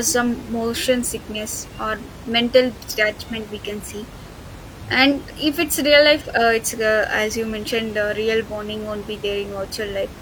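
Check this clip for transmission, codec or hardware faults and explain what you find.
Nothing stood out on listening to the speech, apart from the room's own background noise sitting about 17 dB beneath it.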